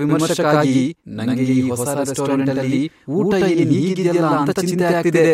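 Throughout the clip, the speech carries a channel delay, heard as doubling. One channel runs about 93 ms late, which fits a 4096-sample buffer. After the mix to mono, that late copy sits at equal level. Each syllable returns as a distinct slap echo.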